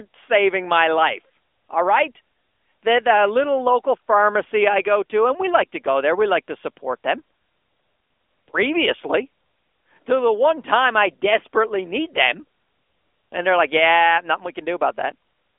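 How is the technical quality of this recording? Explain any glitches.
The recording is limited by a mobile-phone codec for its whole length. AMR narrowband mobile codec, throughout: each 20 ms frame is rebuilt from a vocal-tract model and sparse pulses, so speech sits in a 300 Hz to 3.5 kHz band with nothing above 3.6 kHz. The result is muffled and audibly buzzy, which fits a mid-rate mode of about 10 kbps.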